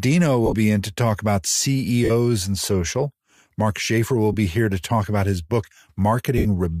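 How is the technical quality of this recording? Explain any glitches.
The recording has four short dropouts from lost LE Audio frames. A faint grainy edge is likely from Bluetooth LC3 compression.

Lost LE Audio frames occur at 0.46–0.54 s before "be in to talk", at 2.05–2.11 s between "in to talk about" and "and social", at 4.32–4.35 s before "be here to talk", and at 6.38–6.46 s. The decoder fills each gap by repeating the last spectrum with scrambled phase. The sound briefly turns into a noisy, smeared blur.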